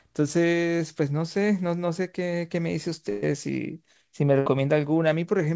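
At 3.10 s the speech hits a burst of packet loss: roughly 120 ms goes missing, and the receiver papers over it by stretching the last bit of sound and fading it, so you get a brief held, smeared patch before things pick up further along with that chunk gone. It happens again at 4.40 s, shorter this time, about 60 ms. All of this sits on a call path band-limited to 8 kHz, which fits G.722.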